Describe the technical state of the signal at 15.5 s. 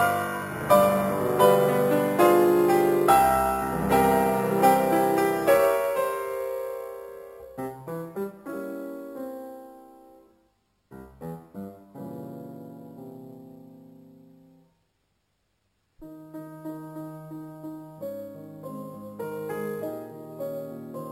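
At 15.5 s a bright, metallic fizz rides on top of the sound, rising and falling with it, sitting about 20 dB below the signal itself. This is imaging from sample-and-hold upsampling, present across the whole clip. Audio at 12 kHz was converted to 44.1 kHz by simply repeating samples, with no smoothing filter, so mirrored copies of the spectrum appear, the lowest filling the 6 kHz to 12 kHz band and running opposite to the pitch.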